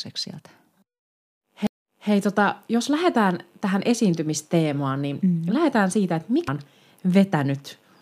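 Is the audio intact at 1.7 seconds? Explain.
No. At 1.67 s the speech has a CD skip: a knock or a flaw on the disc threw the laser onto a different turn of its spiral, so the player muted for roughly 10 ms and resumed from a different point in the track. It is heard as a tick or tiny gap followed by a sudden jump. Unlike a simple dropout, where the sound simply continues after the gap, here the speech picks up at a displaced position.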